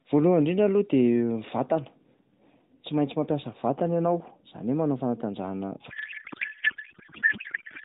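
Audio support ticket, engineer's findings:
Codec payload misread from 5.90 s to end of clip: AMR packing mismatch, octet-aligned frames parsed as bandwidth-efficient, fields misplaced. Narrowband speech collapses into garbled warble and noise barely tracking it.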